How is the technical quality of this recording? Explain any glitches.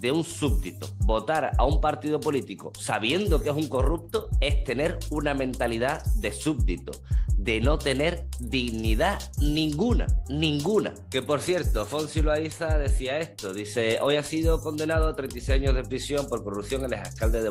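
No glitches or technical faults can be heard anywhere.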